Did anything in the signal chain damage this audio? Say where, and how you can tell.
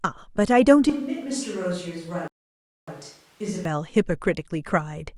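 Yes. From 0.9 s to 3.65 s the speech abruptly turns roomy and hollow, loses low end, drops by about 10 dB, and carries room noise about 30 dB below it. This is likely a switch to a distant microphone at the capture stage, with the close mic's feed lost.

At the playback stage, a rebuffering stall cuts the audio to silence from 2.28 s to 2.88 s, then resumes exactly where it stopped. Nothing is missing, but about 0.6 s is added while the player waited for more downloaded data.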